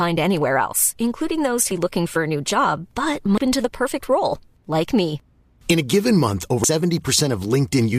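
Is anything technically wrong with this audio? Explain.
Yes. This speech has damaged data in a compressed stream, heard three times as short glitches: at 1.71 s, between "anywhere else including those" and "looking for a new"; at 3.38 s, between "a new job but" and "to the perfect role"; and at 6.64 s. Corrupted bytes make the decoder misread a frame and resynchronise at the next header. On a spectrogram, each event appears as a thin broadband vertical streak. In the waveform, it shows as an abrupt discontinuity.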